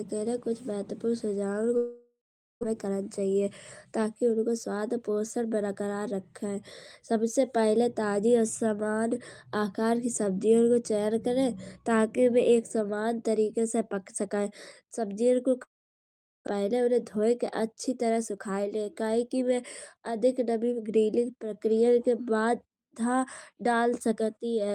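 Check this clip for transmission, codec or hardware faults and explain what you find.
Two network faults recur: long dropouts, each followed by a jitter buffer speed-up.

Long network dropout, 1.77–2.65 s and 15.63–16.49 s: packets likely stopped arriving and about 0.6 s of audio was lost. The last sound smears into a fading buzz, then goes silent before the speech resumes.

Jitter buffer speed-up, 2.85–3.43 s, 3.85–6.02 s and 16.57–19.43 s: the receiver trimmed pitch-period slices to shed the excess delay, about 50 ms in the first stretch and roughly 0.2 s in the others. The speech runs 7–9% faster at unchanged pitch and sounds rushed.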